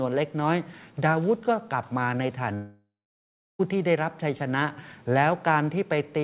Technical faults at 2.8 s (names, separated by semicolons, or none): long network dropout